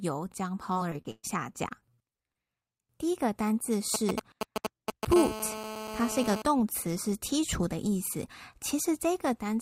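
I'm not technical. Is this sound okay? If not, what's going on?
No, this speech clip has three faults.

Repeated packet loss (robotic sound), from 0.73 to 2.37 s: the voice turns choppy. Pieces of the audio failed to arrive in time, about a dozen times in quick succession, the longest gap lasting about 0.12 s. Each time, the system covered the hole by stretching out the last bit of sound it had, so roughly a fifth of this stretch is filler rather than real speech.

GSM signalling bursts, from 3.94 to 5.14 s, right after "一个单字": a galloping dit-dit-dit of short buzzes, about as loud as the speech itself. An older 2G mobile phone nearby was briefly talking to its network, as phones do before a call or text comes in. The recording equipment picked up those radio pulses and turned them into sound, buzzing at 217 Hz.

GSM phone buzz, from 5.16 to 6.42 s, just before "词是剔除": a steady, harsh, raspy buzz, somewhat quieter than the voice. 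This is the same kind of interference, but now the nearby 2G phone is in an active call, sending radio pulses 217 times a second without pause. The audio equipment turns those pulses into a continuous 217 Hz buzz that has nothing to do with the speech.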